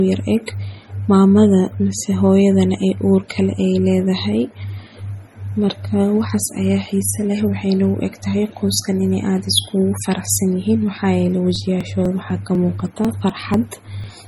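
Throughout the speech, the sound has the smeared, swirly texture of heavy MP3 coding, yet nothing is present above 19.7 kHz. This is likely low-bitrate audio saved at a high bitrate: a 32 kbit/s MP3 re-encoded at 320 kbit/s. Unlike genuine high-bitrate damage, the artefacts are coarse and the re-encode adds nothing new.

From 11.56 to 14.04 s, just after "faraxsanyihiin maxayele", periodic USB or driver dropouts appear: about ten tiny gaps, every 0.248 s, each skipping roughly 2 ms of audio. They sound as evenly spaced ticks heard only over the speech. Their strict regularity sets them apart from random clicks or crackle.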